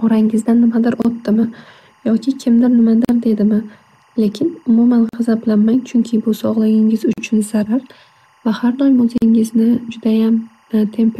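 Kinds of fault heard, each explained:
Timecode bleed: Linear timecode from a neighbouring line leaks into the audio, leaving a faint chirping warble near 1 and 2 kHz behind the speech throughout.
Gap at a join of encoded pieces: Separately encoded pieces were joined untrimmed, opening 29 to 43 ms silences every 2 s, at 1.02, 3.05 (after "yoki kimdir"), 5.09, 7.13 (after "bu sog'ligingiz") and 9.18 s.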